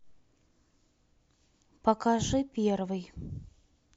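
No audible faults turn up anywhere in this speech recording.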